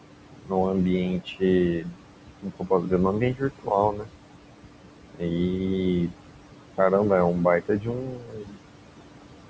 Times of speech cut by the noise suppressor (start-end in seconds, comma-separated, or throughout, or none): 0.38-0.52, 1.79-1.96, 2.42-2.92, 3.20-4.09, 5.14-5.33, 7.61-8.57